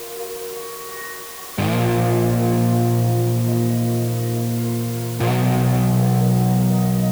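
From start to finish, the music has been quantised to very few amplitude steps, which fits a resolution of around 5 bits, with dither added before each sample was rounded. This is low bit depth with dither. The dither turns what would otherwise be harsh, signal-dependent distortion into random error spread evenly across the spectrum. The result is a constant, uniform hiss sitting only about 15 dB below the music, though the tones themselves stay clean and undistorted.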